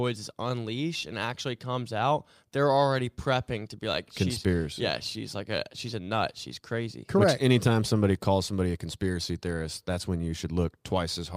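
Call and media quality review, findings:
No audible faults found in this recording.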